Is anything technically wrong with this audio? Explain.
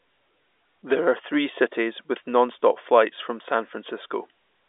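No, the speech simply carries the character of G.711 telephone coding, with its content confined to the usual line band of roughly 300 Hz to 3.6 kHz and nothing above 4 kHz, exactly as a working telephone channel should sound.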